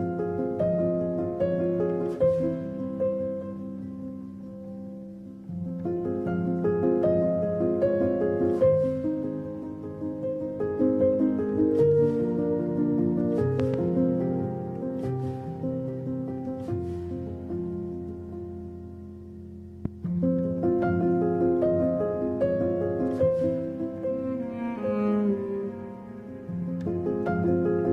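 The audio has two loud pops: a quick double pop from 13.60 to 13.76 s and a single one from 19.85 to 19.88 s, each around 10 dB above the sound. Unlike a dropout, the sound continues unbroken underneath, pointing to a likely voltage pulse from a switch or static.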